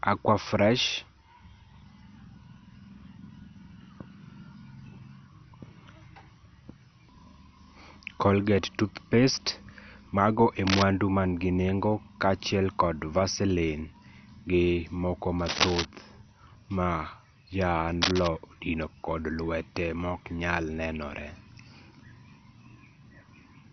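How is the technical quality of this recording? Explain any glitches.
The recording is heavily degraded throughout and has three brief scratch bursts.

MP2 compression affects the whole speech clip, with nothing above 6.1 kHz, dull gurgling quantisation, and flickering bands, which likely points to MPEG Layer II at a low rate around 48 kbps.

Cable scratch noise occurs at 10.67–10.83 s before "manigi nengo kachiel", at 15.39–15.85 s after "gi moko", and at 18.02–18.28 s. Each is a rustling burst about as loud as the speech, likely from a worn contact being moved.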